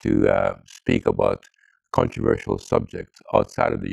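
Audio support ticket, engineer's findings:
Overlap-add ripple, whole clip. Level dips by about 60 dB roughly 40 times a second, giving a hard, robotic flutter. Probable component: frame-based resynthesis stage. Windows overlap without summing to constant gain, so each frame boundary nearly drops out, which fits a hop of about 25 ms. Unlike an effect tremolo, the rate is locked to frame timing and the dips are near-silent gaps rather than a smooth swell.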